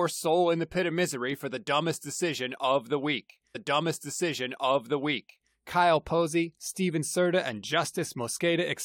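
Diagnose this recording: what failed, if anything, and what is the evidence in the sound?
A stream segment repeated at the playback stage: after "decision of the week", audio from 3.54 to 5.54 s replays, adding 2.0 s. The spectrogram shows the identical block twice, with a blip at the jump back.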